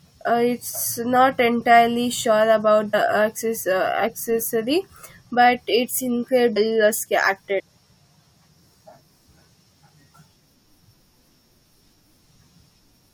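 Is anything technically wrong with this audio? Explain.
Yes. This speech clip has damaged data in a compressed stream, at 2.93–2.95 s, at 6.56–6.58 s just after "but it's", and at 7.58–7.60 s. Each lasts about 20 ms. At these points the compressed data was corrupted, so the decoder could not read those frames correctly, lost frame sync and had to search for the next valid header. The result is a short blip or chirp in the speech.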